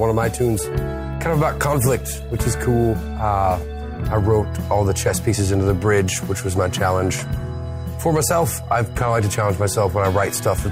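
No technical faults can be heard anywhere in the audio.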